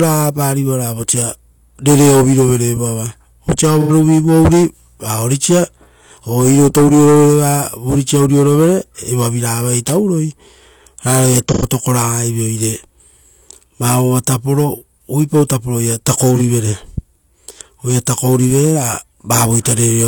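AAC frame loss with concealment occurs at 3.81, 11.46 and 16.35 s. The decoder patches each gap, about 85, 85 and 43 ms, from the previous spectrum. The result is brief smeared, phasey blurs.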